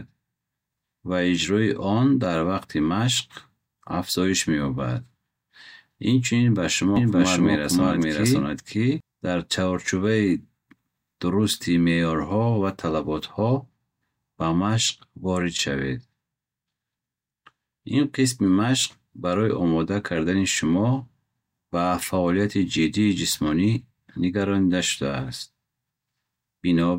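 A speech recording with a doubled audio track between 6.96 and 9.00 s. A full-band second copy of the same audio plays roughly half a second behind the original at about the same level. It carries no decay or added room sound, and it cuts in and out abruptly at those boundaries. The likely cause is the signal being captured twice, once through a slower path, or an edit holding two out-of-step copies.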